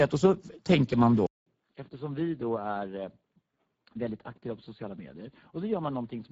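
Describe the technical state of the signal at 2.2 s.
At 2.2 s the Speex codec's plainly audible CELP damage leaves the speech hoarse and noisy, which fits a low bitrate near 10 kbps. A spectrogram would show a smeared, noise-like upper band. From 1.26 s to the end, after "och så tänker man", a 0.2 s gap is followed by duller, boxier, quieter sound. This is likely an input switched to a poorer device. On a spectrogram the band stops near 4.6 kHz rather than 7.6 kHz, and the waveform sits roughly 10 dB lower, with a faint new noise floor.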